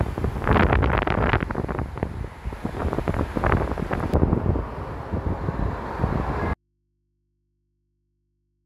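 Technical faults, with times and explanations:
0.00–4.14 s, pre-emphasis left on: the treble lift fits a J.17 curve whose matching de-emphasis was never applied, leaving 10 kHz about 11 dB hot relative to 1 kHz. The sound turns thin and hissy, and a spectrogram shows unnaturally dense, bright upper bands.
6.54 s to the end, audio dropout to a faint residue: the sound cuts off abruptly, with no fade, and only mains hum remains, roughly 50 dB below the signal. This is likely a lost source feeding a still-live input. The waveform collapses to a near-flat line, while the spectrogram keeps thin steady horizontal lines at low frequencies.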